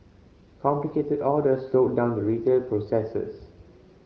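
Speech carried over the AMR wideband (HD Voice) codec, its band reaching to about 7 kHz with the top portion filled by shaped noise, comes through with no technical fault to report.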